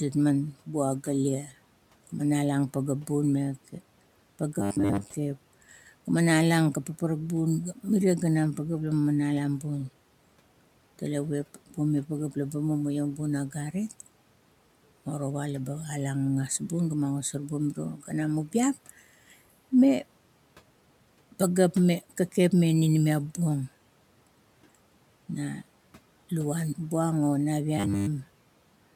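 At 1.42 to 1.53 s, the noise suppressor cuts speech, treating it as noise. The sound dips by about 10 dB and turns faint. From 4.60 to 5.10 s comes robotic sound from repeated short buffers. A 10 ms chunk is likely replayed, giving a rigid, metallic 100 Hz buzz. At 17.94 to 18.12 s, the suppressor swallows sound again, about 9 dB down. From 27.78 to 28.10 s, the same 100 Hz buzz returns.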